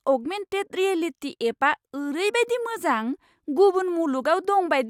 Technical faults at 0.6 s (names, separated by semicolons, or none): none